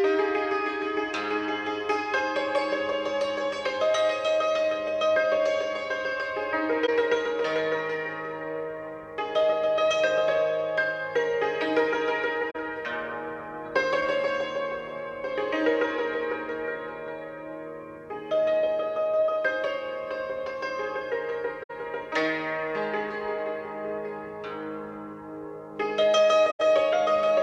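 Brief faults occur at 6.84 s, 12.50 s, 21.63 s and 26.50 s, lasting 50 to 100 ms. These are corrupt frames concealed: the decoder detected damaged AAC frames and papered over them.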